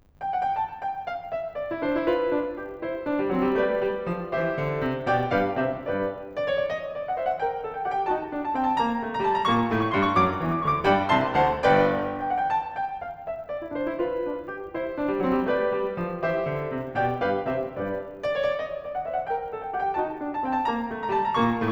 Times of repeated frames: none

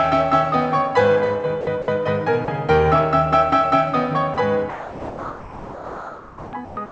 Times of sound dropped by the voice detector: 1.61-1.88, 2.45-2.48, 4.34-4.37, 4.70-6.77

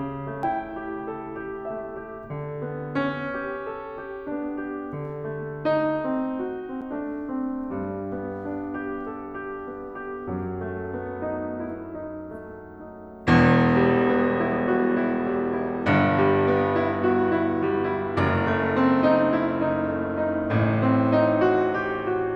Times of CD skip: 0.43, 6.81

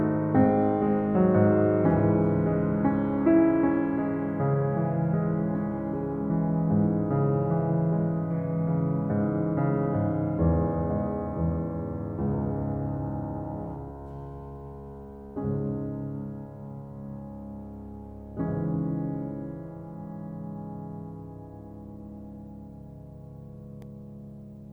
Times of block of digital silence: 23.82

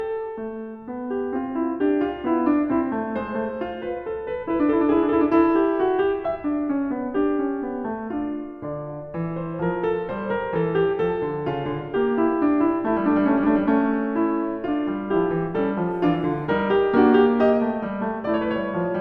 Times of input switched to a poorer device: none

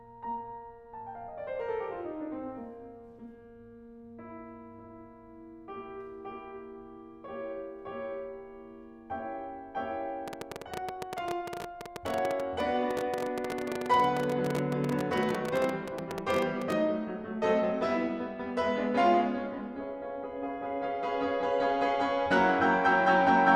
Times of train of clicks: 10.28-16.73

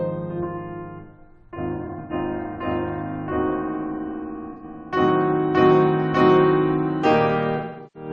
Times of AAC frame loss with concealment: 1.76-2.12, 4.53-4.64, 7.56-8.10

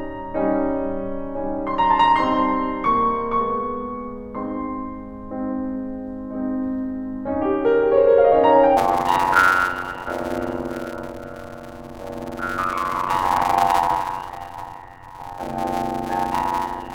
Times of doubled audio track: none

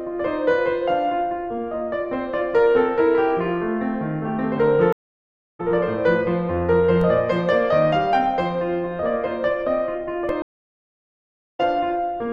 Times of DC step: 7.01, 10.29

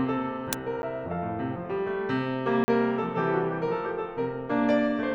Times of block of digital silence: 0.82, 2.64-2.68

